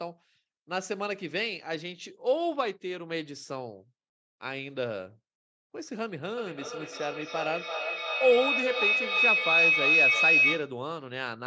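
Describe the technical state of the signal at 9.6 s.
At 9.6 s the signal is inside a feedback howl that runs from 6.37 s to 10.82 s. Two devices in the same room are on the call, so the loudspeaker output re-enters a microphone with net gain on each pass. The repeats build rather than decay and narrow to a tone around 3 kHz, pulsing roughly every third of a second and peaking about 8 dB above the speech, within the call's 8 kHz bandwidth.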